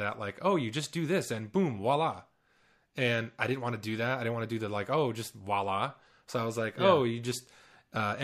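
No technical faults are audible anywhere in the speech.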